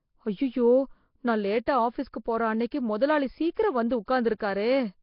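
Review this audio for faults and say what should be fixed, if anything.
The speech throughout has a rough, hissy halo and a smeared, underwater quality, with nothing above 5.3 kHz. This is most likely Nellymoser compression, heavily degraded at a rate that points to roughly 22 kbps. Coding fixed blocks with too few bits leaves weak bands empty and fills them with noise. On a spectrogram this shows as a hard ceiling at 5.3 kHz and grainy, speckled patches where the harmonics should be. To prevent it, record or export with a modern codec at a higher bitrate.

Pre-echo appears at 1.66 s, 2.71 s, 3.55 s, 3.90 s and from 4.06 to 4.08 s. Before each of these sharp attacks, a short hiss leads in by 10 to 24 ms, and the onset itself sounds softened. The codec spreads the noise meant for the loud attack across its whole block, including the quiet moment before it. On a waveform, low fuzz rises just ahead of each transient. 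A spectrogram shows a faint vertical smear to its left. To prevent it, use a codec that switches to short blocks on transients.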